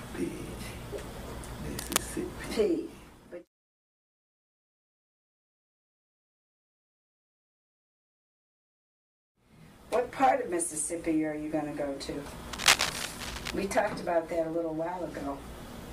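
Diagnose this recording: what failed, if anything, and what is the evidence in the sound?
Cable scratch noise in the analogue wiring: scratchy bursts at 1.77–1.99 s and 12.53–13.50 s, matching then exceeding the sound, likely from a worn connector's fluctuating contact resistance.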